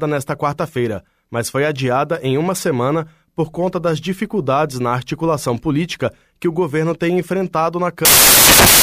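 Right after "o governo tem enfrentado", at about 8.05 s, the speech collapses into loud, harsh broadband noise that runs to the very end at 8.83 s. That's samples built from the wrong bytes: the reader is pairing up each sample's bytes incorrectly, whether shifted by one, swapped or misaligned. The jittery low-order bits end up acting as the loudest part of every value, so you get harsh noise in place of the speech.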